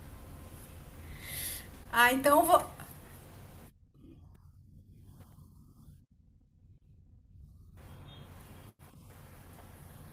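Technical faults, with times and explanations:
Nothing to flag in this speech recording; there's no technical fault to point to anywhere along it.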